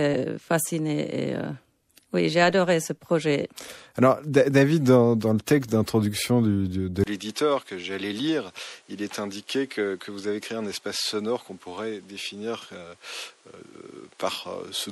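Throughout the clip, the speech was likely passed through MP3 compression at a rate that fits about 64 kbps. Too few bits were left for the weaker frequency lines, so the damage is plainly audible: a watery, swirling texture and smeared attacks on the speech.

At 7.04 s, the input likely switched to a poorer device, with a 20 ms silence at the switch. From there to the end, nothing above 11.7 kHz comes through, the level drops by roughly 5 dB, and new background noise sits roughly 30 dB below the speech.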